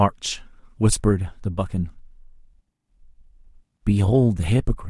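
No technical faults occur at any point in the recording, so there are none to describe in time order.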